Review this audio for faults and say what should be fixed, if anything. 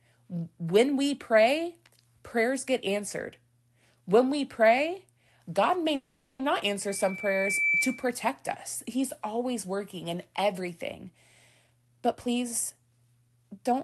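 A call audio freeze runs from 5.95 to 6.42 s. The likely cause is packets stalling in transit until the jitter buffer ran dry, so the receiver stretched the last sound into a fading fill for about 440 ms. When delivery resumed, the speech carried on exactly where it had stopped. Nothing is lost, but a pause of roughly half a second is inserted and everything after it arrives about 440 ms later. Preventing this means fixing the network path's delivery stalls or giving the jitter buffer more headroom.

A loudspeaker feedback squeal sounds from 6.88 to 8.14 s. The microphone was picking up the loudspeaker it feeds, and at 2.3 kHz the loop gain went above one. That tone reinforced itself on every pass, swelling over roughly 0.7 s into a piercing whistle about 5 dB louder than the speech before it died away. Prevention comes down to separating microphone and loudspeaker, using headphones, lowering playback gain, or enabling echo cancellation or a feedback suppressor.

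A jitter buffer speed-up covers 11.64 to 13.84 s, starting just after "always working in everything". The buffer was holding more audio than it aims for. To shed that excess the receiver repeatedly cut out short pitch-period slices, removing around 0.4 s in total. The speech therefore plays at about 119% of normal speed at unchanged pitch and sounds hurried. Steadier packet delivery avoids the build-up, and a gentler buffer-drain policy makes any catch-up far less noticeable.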